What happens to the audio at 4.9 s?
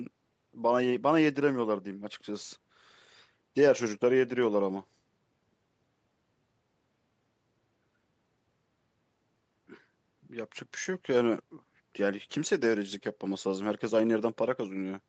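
Nothing goes wrong at 4.9 s; the speech carries on intact through that moment, with the same 8 kHz top end from the call path as around it.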